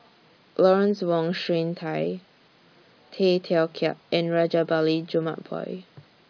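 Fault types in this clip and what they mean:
The speech in the clip shows no fault types.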